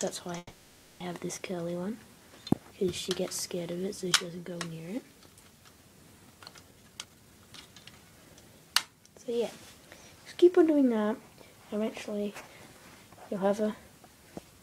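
Right at the start, from about 0.37 to 1.02 s, there's a call audio freeze: the sound stalls, and the last bit gets stretched into a fading buzz that dies to a brief silence before things pick up again exactly where they left off. That's likely packets held up in transit draining the jitter buffer, so roughly 630 ms of gap gets inserted and nothing is actually lost. Later, between about 6.71 and 8.42 s, comes the jitter buffer speed-up. The receiver catches up on that built-up delay by snipping out tiny pitch-period slices over and over, so the audio runs at about 138% speed with the pitch unchanged and sounds noticeably hurried. In total something like 0.7 s gets trimmed out there.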